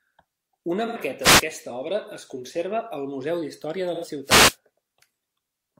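At 0.86 to 0.97 s a brief smeared, phasey patch blurs the speech, and the same happens again at 3.93 to 4.05 s. This is AAC frame loss with concealment: about 85 ms of data went missing, which fits two lost frames, and the decoder filled the gap by reusing the last good spectrum. From 1.21 to 1.44 s, just before "obra es conserva al", a short swish of static rises over the speech, and a longer burst follows at 4.24 to 4.57 s. This is a wireless microphone noise hit: reflections cancelled the FM radio signal, so receiver noise surged through.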